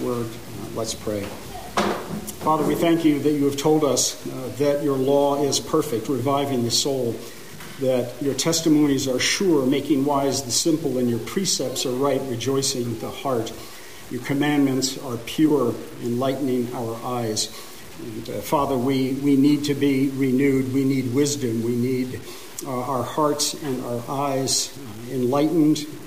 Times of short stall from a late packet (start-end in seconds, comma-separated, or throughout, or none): none